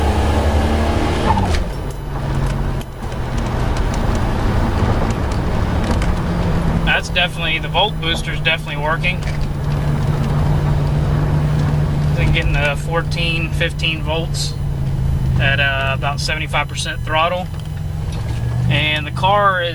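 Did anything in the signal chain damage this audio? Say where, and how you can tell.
Yes. There's USB whine running through the whole clip: a steady pitched tone at 1 kHz, with harmonics reaching up to 20 kHz where it's strongest, sitting roughly 30 dB under the signal. That's the bus's 1 ms frame current leaking into the analogue wiring through power or ground.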